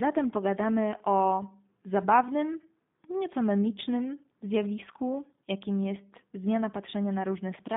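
From start to finish the speech carries plainly audible G.729 codec damage, with a rough, slightly synthetic edge, consistent with 8 kbit/s telephony coding. The codec rebuilds each short frame from a vocal tract filter, a pitch predictor and a few pulses, so fine detail is lost. Energy sits between 150 Hz and 3.7 kHz. A spectrogram would show a hard ceiling near 3.7 kHz, an empty band below 150 Hz, and smeared, grainy harmonics.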